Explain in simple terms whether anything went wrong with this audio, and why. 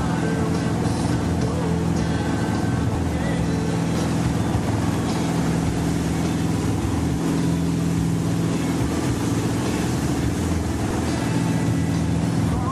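Overlap between stream segments causes small clicks or skips at 2.95 s, 4.94 s and from 10.91 to 10.93 s. The audio arrives in pieces about 2 seconds long, and the timing labels on neighbouring pieces overlap slightly. The player trims the overlap, but that stretch wasn't really repeated, so a few to about 20 milliseconds of real sound are thrown away. The waveform then jumps straight to the next piece, which you hear as a tiny skip.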